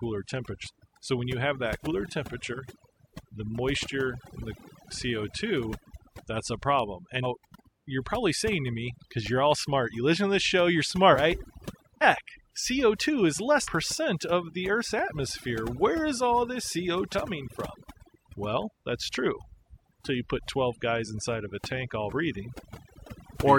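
Overdone noise removal runs through the whole recording. Bands sitting near the noise estimate are pulled down hard, so the background drops and breaks up into twinkling specks, and the speech loses its quieter components.

Compressed frames skipped occurs eight times, at 0.63–0.67, 1.84–1.88, 7.22–7.25 (between "that's a problem" and "you're probably saying to"), 11.12–11.16 (after "to this show you're"), 12.01–12.04, 13.63–13.68, 17.12–17.15 (after "is all this") and 22.08–22.13 s. Each time whole 46.4 ms frames go missing, and the audio jumps forward. The jump is about 200 ms in the first three, about 300 ms in the next four, and a single frame of about 50 ms in the last.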